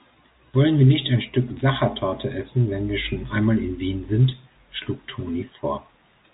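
Nothing goes wrong in this speech clip; it's just ordinary G.711 telephone audio, with the usual narrow band topping out around 3.8 kHz.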